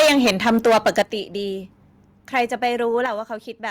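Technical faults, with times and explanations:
0.00–1.02 s, microphone overload: The sound is harsh and crackly from the start. Peaks overshoot the ceiling by about 13 dB, and around 15 percent of samples are flattened. The likely cause is input volume set too high for the converter. The waveform tops are sliced off, which adds a gritty edge.
1.02 s, microphone volume stepped down: The level drops abruptly by about 8 dB, right after the heavy distortion. The likely cause is the call software cutting the device's input volume in one step. Background and sound fall together, so the change is a sudden step rather than a fade.
2.36–2.67 s, microphone overload: A briefer, milder crackle returns. Peaks go over by about 3 dB, and only a small fraction of samples is clipped. Even after the earlier cut, the loudest moments likely still exceed the converter's limit, so their tops are clipped and the edge comes back.
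3.06 s, microphone volume stepped down: A second sudden drop of about 6 dB follows shortly after that clipping. The likely cause is another single-step reduction of input volume. Everything, including the background, becomes quieter at once.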